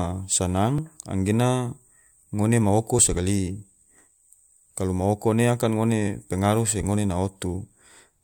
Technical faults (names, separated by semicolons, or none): dropped buffer (overrun)